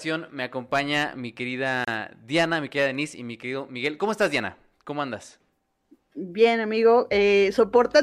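At 1.85 s the speech drops out for about 30 ms, a gap at a join of encoded pieces. Two separately encoded chunks were butted together untrimmed, so encoder start delay and end padding stayed in, leaving a short hole with smeared edges before the sound resumes where it left off.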